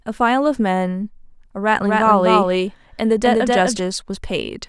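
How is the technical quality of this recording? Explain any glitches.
There is one clear glitch. From 1.8 to 3.8 s, a doubled audio track appears. A second copy trails roughly 300 ms behind at similar level, likely from a slower capture path.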